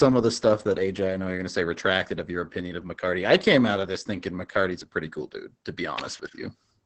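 Opus voice compression runs through the whole speech clip. At a low bitrate, the linear-prediction coder keeps only wideband content, nothing above about 8.5 kHz. Speech sounds muffled, hoarse and slightly robotic.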